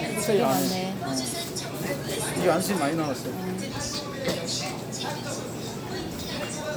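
No technical faults can be heard anywhere in this recording.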